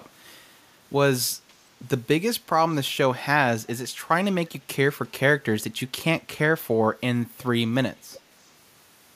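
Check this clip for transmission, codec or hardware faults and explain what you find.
One fault appears three times: an echo leak. The likely cause is an echo canceller on a loudspeaker-equipped far end letting part of its microphone pickup through, so this side's speech returned delayed. Brief scraps arrive at 2.69 to 2.75 s, 5.04 to 5.11 s and 8.12 to 8.20 s, each trailing the original by about 350 ms. They sit far below the live speech, roughly 25 to 35 dB down, heard as faint ghosts of earlier syllables rather than a full repeat.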